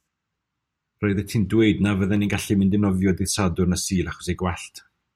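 At 2.16 s the speech hits a brief underrun with a held sample: the output buffer ran dry and the converter froze on its last value for about 0.73 ms, a stall that fits a 32-sample gap. Roughly 0.7 ms of audio was lost. On the waveform a tiny flat step appears.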